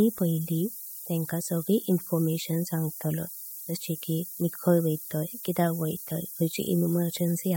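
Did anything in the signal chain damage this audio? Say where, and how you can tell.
Yes. The damage is at the sample-format conversion stage: a steady, thin hiss sits under the speech for the whole clip and grows brighter toward the top of the band, the mark of low bit depth with noise shaping. The speech has been requantised to about 6 bits, and the rounding error was pushed upward in frequency, leaving the hiss only about 10 dB below the speech. A spectrogram would show a constant noise floor rising steeply toward the highest frequencies, and the waveform a fuzz that never stops, even in pauses.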